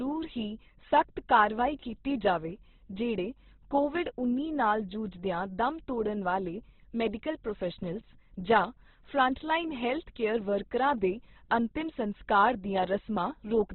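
From start to finish the speech is cut off above about 4.1 kHz and sounds heavily grainy and rough, with a noisy fill where detail should be. That points to Opus compression, likely in its music mode at a bitrate around 12 kbps, which also narrows the band.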